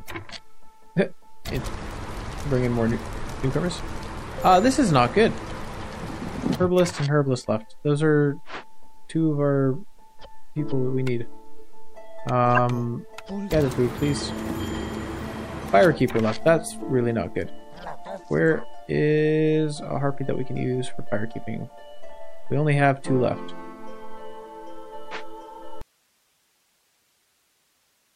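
A short, fairly loud glitch of misplaced energy from 12.55 to 12.58 s is a corrupt frame decoded: a single damaged compressed frame was played despite flipped bits.

At 25.82 s the sound cuts abruptly to faint hiss, far below the signal, until the end. This is likely an audio dropout to a faint residue, with the path still live.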